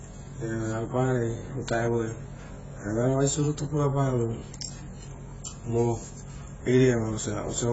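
From start to finish the speech is band-limited, with nothing above about 7.7 kHz, and carries heavy coding damage: the sound is dull and smeared, and sibilants and sustained sounds take on a warbling, fizzy texture. This points to AAC compression, likely AAC-LC at a very low bitrate around 16 kbps, where the encoder lowers its cut-off, leaves gaps in the spectrum and quantises the remaining frequency lines coarsely to save bits.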